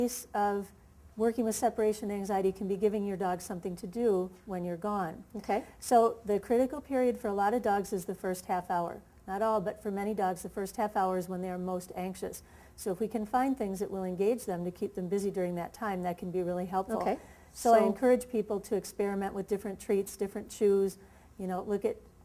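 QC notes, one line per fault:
Nothing stood out on listening.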